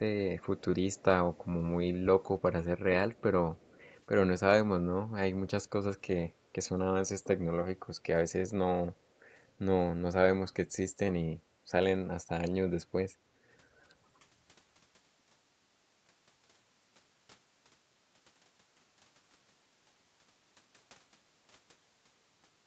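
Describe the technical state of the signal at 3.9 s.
A faint, delayed copy of the speech trails the voice from 3.56 to 3.95 s, lagging by about 291 ms and sitting far below it. This echo leak is likely from a loudspeaker on the far end whose echo canceller let some of the pickup return.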